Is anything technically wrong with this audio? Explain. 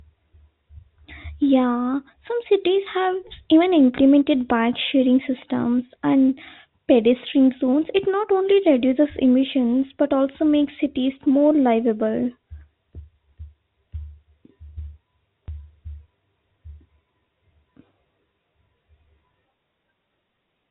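Yes. At 15.46 s there is a single packet loss with the last packet repeated. About 20 ms of the speech goes missing, which fits one lost packet. The receiver fills the gap by replaying the previous 20 ms block. It is heard as a small blip. The narrow telephone band from the G.711 coding stays audible throughout.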